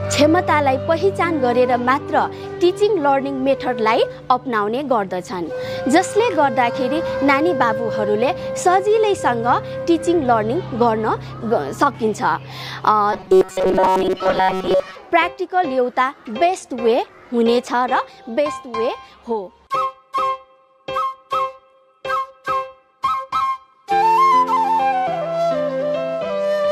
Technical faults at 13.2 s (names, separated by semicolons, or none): robotic sound from repeated short buffers